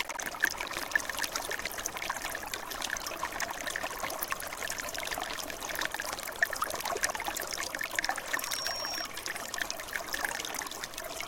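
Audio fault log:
0.00–7.15 s, buffer tearing: write and read pointers cross each period, so roughly half of each buffer replays audio about 200 ms old, giving a 21.5 Hz rattle that fits a 2048-sample buffer.
8.32–9.08 s, loudspeaker feedback squeal: the microphone-to-speaker loop exceeds unity gain at 5.6 kHz, so a single tone swells over roughly 0.3 s to about the level of the sound.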